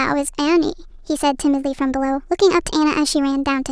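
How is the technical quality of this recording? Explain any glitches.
Not great: the whole speech clip plays too fast and too high. That's a wrong sample rate: the speed is up about 1.38 times and the pitch about 5.6 semitones, which fits 16 kHz audio played back at 22 kHz with no conversion.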